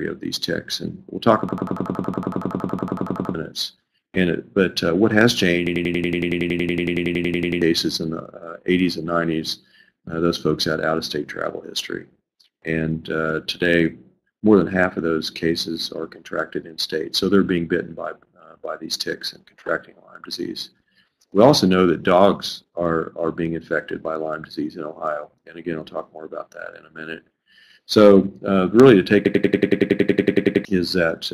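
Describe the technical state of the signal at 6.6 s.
A system hang loop runs from 5.67 to 7.62 s. A frozen system replays one 93 ms slice at about 10.8 Hz, a machine-gun stutter fitting a 4096-sample buffer.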